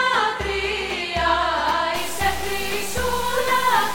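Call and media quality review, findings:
Low bit depth without dither, 1.96 s to end of clip (3.95 s). Grainy, gritty distortion that tracks the signal. Likely cause: truncating requantizer, consistent with about 4 bits, no dither. Error roughly 10 dB below signal. Waveform: visible staircase steps. Spectrogram: signal-correlated hash smeared broadband, gating with level.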